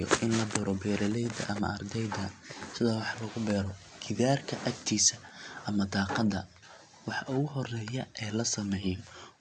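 No technical faults are audible.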